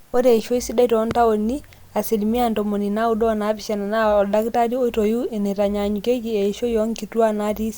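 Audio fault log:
1.11–1.13 s, loud pop: a single sharp pop lands abruptly on top of the speech, peaking roughly 10 dB above the surrounding level and lasting only about 20 ms, while the speech carries on underneath without a break. The shape is that of a brief voltage spike added into the signal path, likely from a connector being disturbed, a switch, a static discharge or a driver glitch, and then smoothed by the circuitry downstream into a short, hard transient.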